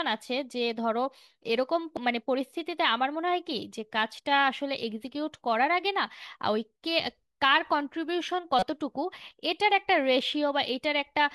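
Speech, with damaged data in the compressed stream: a brief blip at 1.97 s and a longer one from 8.59 to 8.63 s, where the decoder misreads corrupted frames and resynchronises.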